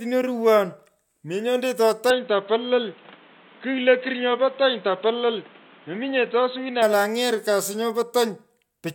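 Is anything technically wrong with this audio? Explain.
Yes. From 2.10 s to 6.82 s the speech suddenly loses everything above 4.1 kHz and takes on a dull, boxy tone, with new background noise roughly 30 dB below the voice. The loudness barely changes and there is no gap at either switch. The likely cause is an input switched to a poorer device, whose narrower band and own noise floor replace the original microphone's. On a spectrogram the top band vanishes abruptly, while the waveform's envelope stays nearly unchanged.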